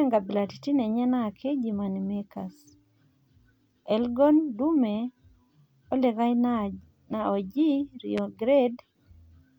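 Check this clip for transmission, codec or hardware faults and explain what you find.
One fault: at 8.18 to 8.20 s a single loud pop cuts sharply through the speech, peaking around 10 dB above it while the speech continues underneath. It likely comes from a sudden voltage step or pulse, such as a switch, static discharge or driver glitch, added to the signal and shaped into a brief thump by the following circuitry.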